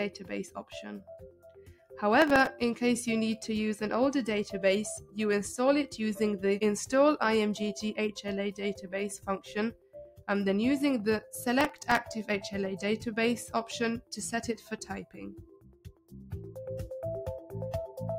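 A noise suppressor applied to music or sounds stays on throughout, treating held and fading material as noise and pulling it down. Level swings by about 10 dB, so the sound pumps and thins, and a waveform shows sustained passages repeatedly sagging while attacks stay tall.

The sound is cut by the noise suppressor at 0.10–0.32 s, 0.48–1.99 s, 4.97–5.17 s, 8.52–8.92 s, 9.16–10.28 s, 14.56–14.86 s and 15.03–16.57 s. Drops reach about 9 to 20 dB, deepest near 16 s. On a spectrogram these appear as darkened stretches where tails fade early.

Processor overload crackle occurs at 2.22–2.47 s and 11.61–11.96 s. In each burst, around ten deadlines are missed, each one replaying old audio with hard edges, which fits buffers of roughly 1.5 ms. The result is a gritty tearing heard over the sound. The waveform shows jagged discontinuities, and the spectrogram shows thin vertical broadband streaks.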